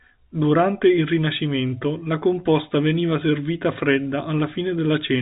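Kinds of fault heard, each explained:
No fault of any kind can be heard in this speech clip. It comes through G.711 telephone coding, so nothing reaches above about 3.8 kHz, and any trace of the format's quantisation noise is faint at most.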